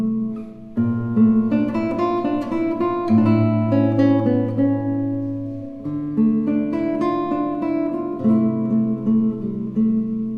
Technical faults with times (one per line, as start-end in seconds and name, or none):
none